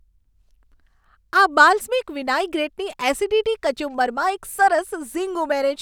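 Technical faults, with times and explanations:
No technical faults found anywhere in the speech.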